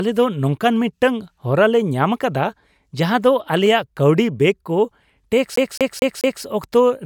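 A speech clip that catches in a fast, even stutter from 5.56 to 6.43 s, where the same short fragment of about 0.22 s plays four times with a brief mute at each jump. This is a CD stuck on one turn: a scratch keeps throwing the laser back one track on every rotation.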